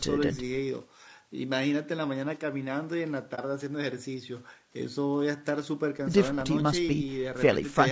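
Throughout the speech, harmonics sound rough and grainy with noise filling between them, likely from low-delay AAC compression (AAC-ELD) at a low bitrate near 32 kbps, distinct from steady background hiss. From 3.35 to 3.39 s, AAC frame loss with muting leaves a brief dip where the decoder zeroed the lost spectrum; unlike a dropout or splice, it fades out and back in.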